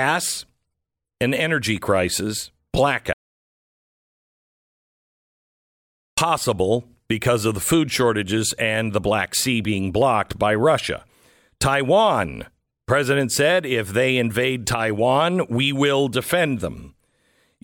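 From 3.13 s to 6.18 s the speech drops out to silence, with no room tone, for about 3.04 s, then resumes mid-flow. This audio dropout to silence likely came from a lost input while recording continued writing silence.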